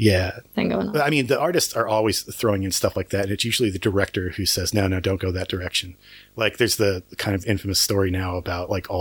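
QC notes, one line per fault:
Throughout: video or display buzz, 50 Hz field-rate buzz with hash and 15.6 kHz line tone, coupled from display circuitry, well below the speech.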